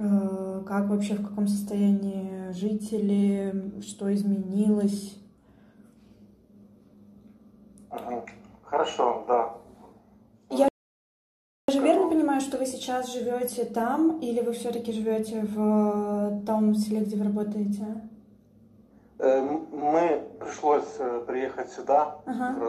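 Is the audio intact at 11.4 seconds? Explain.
No. At 11.4 seconds playback is inside a rebuffering stall running from 10.68 to 11.68 s. The player used up its downloaded audio and paused until more data arrived, so the sound cuts abruptly to silence and then resumes exactly where it stopped. Nothing is skipped, but about 1.0 s is added. On a waveform this shows as a flat line of digital silence with clean edges. A spectrogram shows a blank vertical band with no energy at any frequency.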